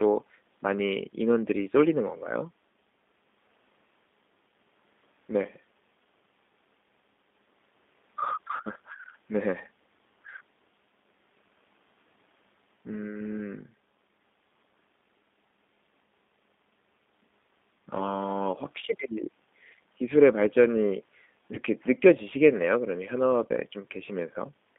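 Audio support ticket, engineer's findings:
G.729 codec on the line throughout: a low-rate CELP model, consistent with 8 kbit/s, rebuilds the speech from filter and pulses. The band is limited to roughly 200 Hz–3.6 kHz, giving a plainly rough, synthetic tone.

VoIP packet loss concealed by the speech codec, 21.55–21.6 s: a gap consistent with one lost 10 ms frame. The decoder extrapolates the previous pitch and filter, so a brief smear and weakened sound persist after recovery.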